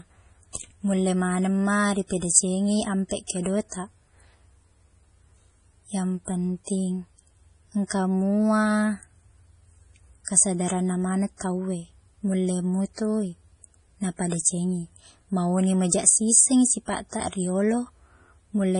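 Speech runs with heavy MP3 compression throughout, likely from a low bitrate such as 32 kbps. Nothing remains above 10.5 kHz, and weak frequency lines flicker on and off between frames, giving a watery swirl and chirpy s sounds that a plain low-pass filter would not add.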